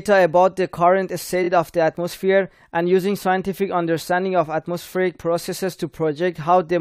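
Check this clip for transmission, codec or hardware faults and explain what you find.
Two brief stutters from repeated frames, at 1.43–1.48 s and 4.82–4.84 s. A 23.2 ms slice of speech plays again, three times in all at the first spot and twice at the second. This fits a single compressed frame being decoded more than once, and it adds 46.4 ms and 23.2 ms respectively.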